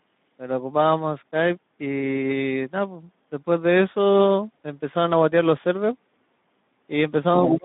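Throughout, the speech carries the Speex codec's coding damage: a plainly hoarse, grainy texture from the thin CELP excitation, which fits a Speex mode near 11 kbps. The band runs only from about 150 Hz to 3.7 kHz, so everything above sounds dull and telephone-like.

From 7.37 to 7.59 s, a second, fainter voice comes through at about 10 dB below the main speech. This is the other side's voice leaking through, likely loudspeaker echo that the echo canceller left in the microphone signal.

Over the same stretch, from 7.37 s to the end at 7.65 s, the main speech dips in level by up to roughly 20 dB for about 200 ms in total. This is speech suppressed in double talk: the canceller likely turned down both voices together while they overlapped.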